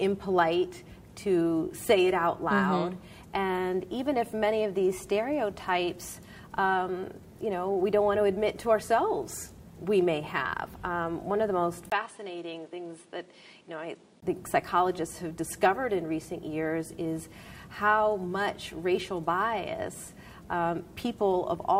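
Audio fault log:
11.90–14.22 s, input switched to a poorer device: after a 20 ms dropout the sound goes dull and a few dB quieter, with nothing above 10.5 kHz and a faint fresh noise floor well underneath. The likely cause is a swap to a narrower-band microphone. Then it clears again.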